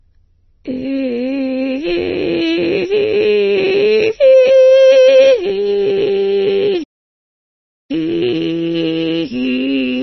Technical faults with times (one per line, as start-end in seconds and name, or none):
0.00-10.02 MP3 compression
6.83-7.91 playback stall